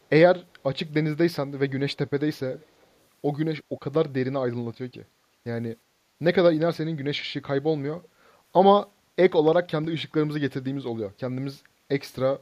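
An echo canceller at a loudspeaker end of the call likely failed to remove everything its microphone picked up, so a delayed copy of the speech was sent back, an echo leak. From 2.53 to 2.87 s, a faint repeat trails the speech by 382 ms, sitting about 25 dB below it. From 8.02 to 8.09 s, a much shorter scrap returns after 368 ms, fainter still at about 35 dB down.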